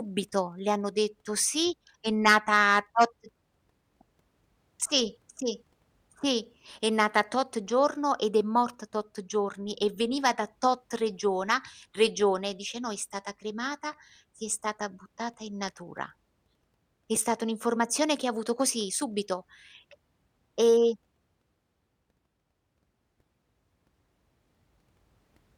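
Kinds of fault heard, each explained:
No kinds of fault are heard in this speech clip, so none can be explained.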